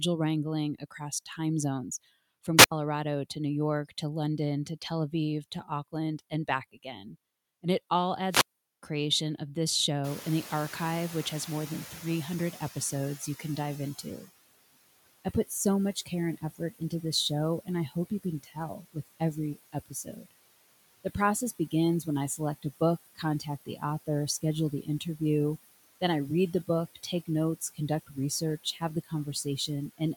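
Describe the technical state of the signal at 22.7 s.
At 22.7 s the noise suppressor is misreading part of the speech as steady background noise. This sits inside the stretch from 21.59 to 25.2 s where it cut speech, pulling down soft consonants and word endings along with the noise by up to about 18 dB, for roughly half a second in total. Those parts sound swallowed or faint.

Under this, the suppressor's normal frame-by-frame work is also audible. It takes the bands it judges to be noise down by about 17 dB, and the room noise (louder since about 10 s, sitting roughly 16 dB below the speech) is part of what it treats as noise. As a result, the background dips in the gaps and comes back up beneath the voice.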